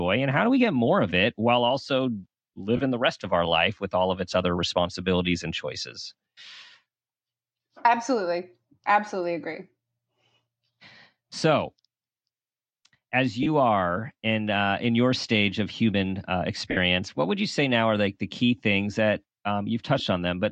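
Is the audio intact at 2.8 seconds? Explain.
No. Bluetooth LE Audio frames were lost from 2.77 to 2.80 s, a gap of about 20 ms that fits two 10 ms frames. The LC3 decoder filled it by repeating the last spectrum with random signs, so the sound briefly turns into a noisy smear.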